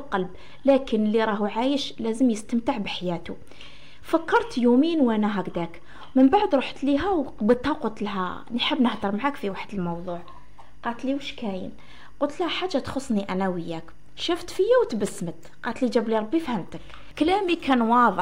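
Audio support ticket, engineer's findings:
Timecode bleed, whole clip: faint chirping warble around 1 and 2 kHz, about 45 dB under programme. LTC crosstalk at 24 frames/s; its steady bi-phase warbling separates it from a constant whine.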